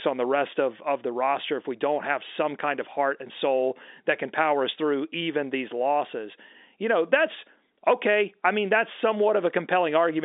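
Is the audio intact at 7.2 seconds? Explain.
Yes, the audio is intact at 7.2 seconds, with nothing there beyond the narrow telephone band of the G.711 telephone coding, which stops short of about 3.8 kHz.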